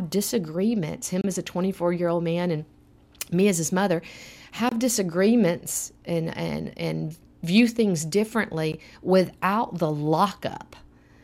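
Speech, broken by three brief gaps with smeared edges: about 28 ms at 1.21–1.24 s before "as a", 25 ms at 4.69–4.72 s before "disagreements and and and", and 15 ms at 8.72 s before "without the". Each is a gap at a join of encoded pieces, where untrimmed encoder start delay and final-frame padding were left in.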